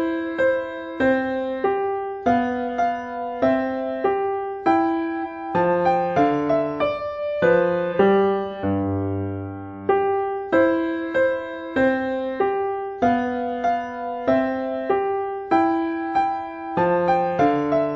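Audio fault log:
2.67–2.69 s, 5.23–5.26 s and 7.92 s: compressed frames skipped. Each is a brief jump as the sound lurches forward by roughly 100 ms, 400 ms and 50 ms. Whole 46.4 ms frames were never decoded.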